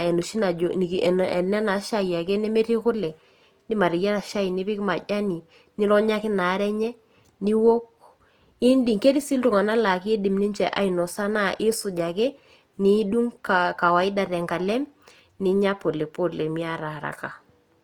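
A speech clip with Opus compression damage from start to finish. The speech sounds grainy, rough and noisy, and the damage is plainly audible. The cause is likely Opus in its music mode, consistent with about 24 kbps. Bandwidth stays full, reaching 20.2 kHz.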